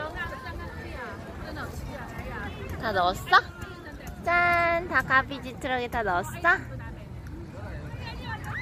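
Nothing stood out on listening; no technical fault could be heard anywhere in the audio.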